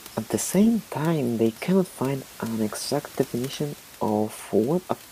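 No technical faults can be heard anywhere here.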